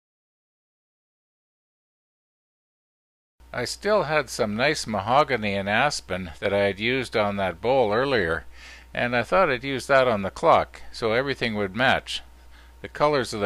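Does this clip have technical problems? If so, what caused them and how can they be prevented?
Yes. One channel drops out from 6.38 to 6.45 s: for that 70 ms the sound abruptly falls by about 6 dB and then returns. The likely cause is one stereo side briefly going silent, so the mono sum carries only half the shared content. Securing cables and connectors and metering both channels separately during capture would prevent it.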